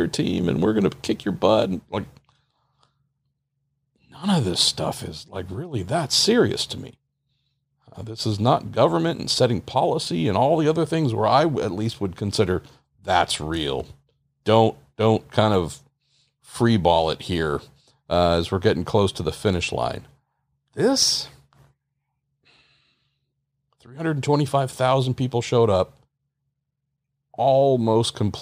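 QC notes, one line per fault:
No faults were found in this speech recording. Nothing in it calls for a timestamp or a flag.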